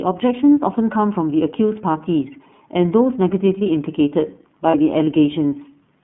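From the start, the speech passes through the iLBC codec, a narrowband VoIP coder that handles each frame independently. The sound is confined to roughly 150 Hz to 3.4 kHz, and the plainly audible coding damage gives it a slightly rough, synthetic edge. The character fits the 13.33 kbps mode with 30 ms frames. On a spectrogram, energy stops at a hard ceiling near 3.4 kHz, with the lowest band thinned below 150 Hz.

At 1.92 to 1.95 s and again at 4.70 to 4.75 s, a single iLBC frame is lost each time. The decoder fills the roughly 30 ms hole by repeating the last pitch cycle mixed with noise, heard as a brief held, faintly buzzy vowel. The waveform shows a run of near-identical repeated cycles, and the spectrogram shows flat, slightly smeared harmonic stripes. Because frames stand alone, the voice is right again almost immediately after each one.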